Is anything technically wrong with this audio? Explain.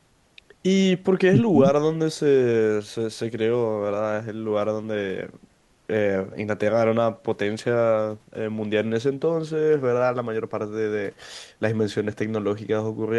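No, nothing technically wrong is audible anywhere in this speech recording.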